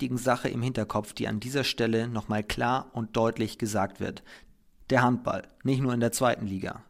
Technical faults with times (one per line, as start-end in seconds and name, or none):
none